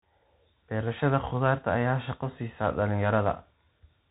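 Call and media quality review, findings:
Bluetooth CVSD headset codec, whole clip. Speech band-limited with nothing above 3.8 kHz, a flat ceiling on the spectrogram. Plainly audible damage: scratchy s sounds, granular hiss under speech, slope-overload distortion on loud highs. Fits 64 kbps one-bit delta modulation.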